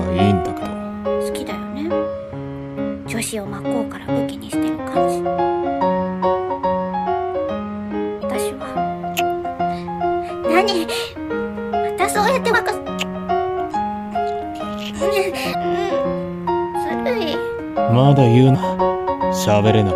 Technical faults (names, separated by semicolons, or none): damaged data in a compressed stream